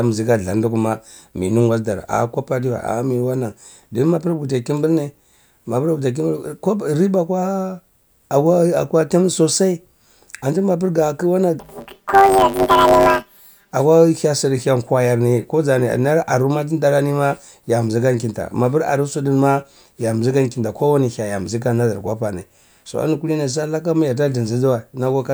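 A speech clip in which the voice turns into a robotic buzz from 11.60 to 13.72 s, pulsing at about 100 Hz with no clear octave shift. The cause is planar audio read as interleaved: each 10 ms block of left-then-right samples is taken as alternating pairs, so every block plays twice at double speed.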